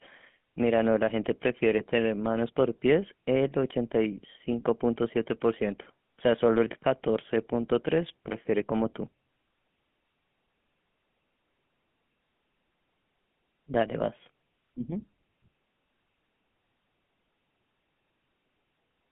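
Speech running through a GSM full-rate codec throughout: buzzy, gravelly roughness within a 150 Hz to 3.4 kHz band, consistent with 13 kbps, with empty spectrogram above 3.4 kHz.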